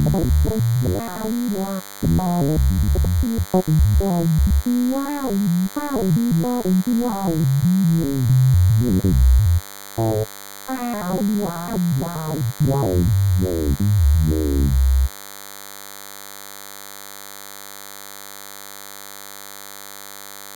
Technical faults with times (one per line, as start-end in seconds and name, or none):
0.00-20.55 DECT cordless phone buzz